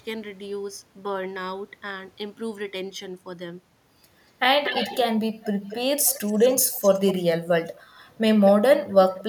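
An echo canceller at the far end likely let its own loudspeaker pickup through, causing echo leak. A delayed copy of the speech returns about 0.24 s late at 4.64–4.99, 5.43–5.76, 6.01–6.53, 6.71–7.15, 8.88–8.93 and 9.18–9.23 s. It is loudest in the first burst and becomes a faint trace by the end.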